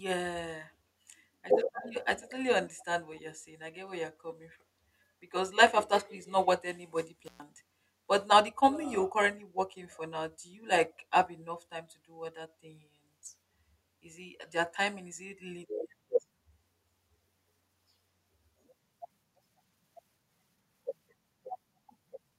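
Faint, delayed scraps of the speech come back at 1.81 to 1.94 s, 2.2 to 2.34 s and 2.66 to 2.85 s, trailing about 203 ms behind and sitting roughly 20 to 25 dB below it. This is likely echo leak, where a loudspeaker's output reached the far microphone and slipped past the echo canceller.

At 7.25 to 7.43 s the sound cuts out for about 120 ms, with crackle at the edges of the gap. This is an intermittent contact: a loose cable or plug briefly opened and broke the signal path before reconnecting.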